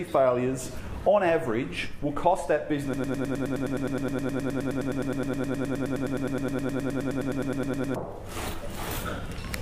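A broken-record loop runs from 2.94 to 7.96 s: a 104 ms fragment repeats exactly, back to back, about 48 times, giving a rapid stuttering buzz. The player or stream likely stalled and kept resending its last buffered piece, so the intended audio there is lost.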